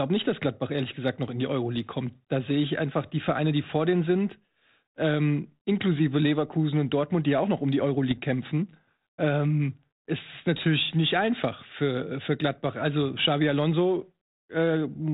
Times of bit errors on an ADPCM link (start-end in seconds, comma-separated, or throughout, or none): 3.23-3.30, 8.11-8.20